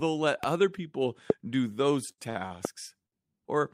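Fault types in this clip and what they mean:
Loud pop, at 0.44, 1.30 and 2.65 s: three single sharp pops, each lasting about 20 ms and standing roughly 15 to 20 dB above the speech, with the loudest at 1.30 s. Each is a sudden voltage step or pulse added on top of the signal, likely from a plug, switch, static discharge or driver glitch, which the following circuits shape into a short thump while the speech carries on unbroken underneath.
Short stall from a late packet, at 2.11, 2.30, 2.47 and 3.06 s: a packet arrived after it was due, so the jitter buffer ran dry and the receiver held the last bit of speech until it came in. The holds last about 66, 53, 32 and 56 ms, and each is heard as a brief frozen stretch with a slight buzz or dip. Nothing is lost, and playback resumes from the same point, only later.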